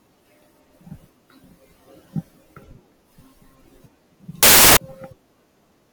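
At 4.43 s the speech suddenly turns into loud, harsh broadband noise for about a third of a second, until 4.77 s. That's samples built from the wrong bytes: the reader put each sample's bytes together wrongly, so the jittery low bits became each sample's big part.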